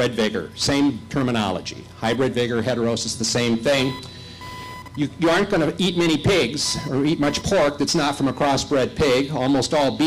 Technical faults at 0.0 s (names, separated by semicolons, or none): computer activity noise